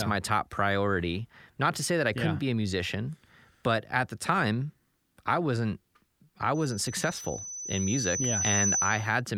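The microphone picks up its own loudspeaker, and after "time I wasn't I" a loudspeaker feedback squeal at 6 kHz swells over about two seconds, from 6.54 to 9.21 s, to roughly 5 dB above the speech.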